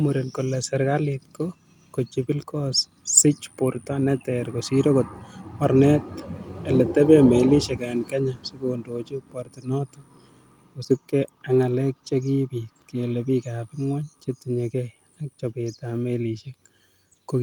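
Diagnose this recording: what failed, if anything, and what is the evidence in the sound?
Nothing in this recording points to a failure at any stage of the chain. There is no evidence of a fault to diagnose.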